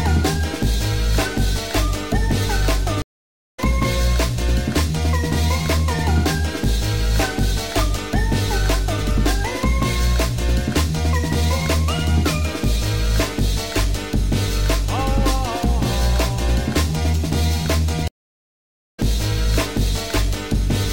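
At 3.02 s and again at 18.08 s, a stream reconnect cuts the sound to silence, for 0.56 s and then 0.9 s, as the connection breaks and a fresh decoder restarts mid-stream. Unlike a plain dropout, each resumption lands about half a second further along, so material is skipped rather than merely interrupted.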